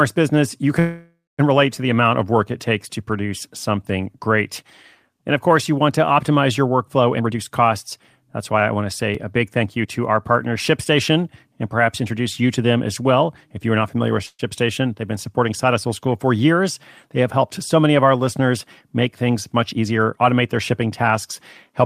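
Speech recording with three kinds of transport and capture fault. A call audio freeze occurs twice. From 0.79 to 1.41 s, between "business you" and "relate to the amount", about 0.59 s of filler is inserted: the last sound carries on as a fading buzz and then drops to silence for roughly 0.23 s. From 14.26 to 14.41 s, between "are not familiar with" and "they've been supporting", a shorter 0.13 s fill ends in about 0.04 s of silence. Nothing is lost in either case, and the speech simply resumes later. The likely cause is delayed packets draining the jitter buffer. A spectrogram would show smeared, repeated harmonics decaying into a blank band, and the waveform would show a tapering envelope and then a flat line. Jitter buffer speed-up appears at 7.18 to 7.63 s (128% speed, around 150 ms cut), 9.63 to 10.31 s (107%, about 50 ms) and 19.23 to 20.73 s (108%, around 150 ms). Short pitch-period chunks are removed repeatedly to shrink excess buffered delay, so the speech sounds rushed while the pitch stays unchanged. 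On a spectrogram the harmonic lines keep their spacing, but syllables sit closer together in time. The first stretch is the most noticeably hurried. A dropped buffer (overrun) at 9.15 s, between "why I want to" and "a big", loses a few milliseconds. Its likely cause is samples being overwritten before they were read. It is heard as a small skip. On the waveform it shows as an abrupt discontinuity, and on a spectrogram as a thin full-height vertical line.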